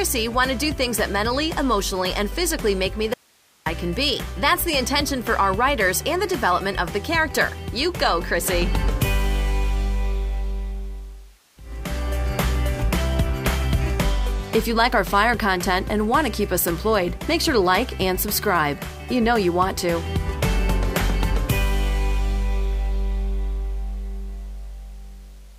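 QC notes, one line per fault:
3.14–3.66 s, audio dropout to a faint residue: the sound cuts out abruptly for about half a second, leaving only hiss roughly 35 dB down, then snaps back in. The likely cause is a brief loss of the source while the downstream path stayed live.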